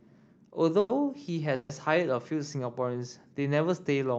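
Held-up packets likely emptied the jitter buffer twice, causing a call audio freeze at 0.79–0.92 s and again at 1.55–1.72 s. Each time the speech stalls into a fading buzz, about 100 ms then 140 ms, before resuming intact and slightly later.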